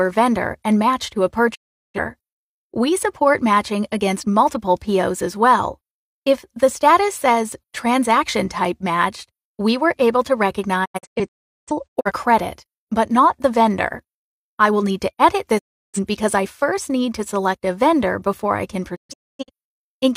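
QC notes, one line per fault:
1.54–1.99 s, 10.84–12.12 s, 15.58–15.99 s, 18.95–19.50 s, digital broadcast dropout: the receiver lost valid frames and muted, with 20 ms fades and 0.34–0.73 s of sound lost each time. The second and fourth break into several short holes. The gaps are clean silences, not repeated or smeared sound as concealment would leave.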